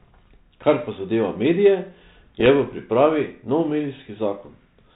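From 2.40 to 2.50 s, just before "v pripravi", bit errors on an ADPCM link break into the speech as pops and a rough burst with brief level jumps. Each flipped bit knocks the decoder's step size and predictor off track, so the damage rings on for milliseconds. The light hiss of the 32 kbit/s G.726 coding carries on underneath.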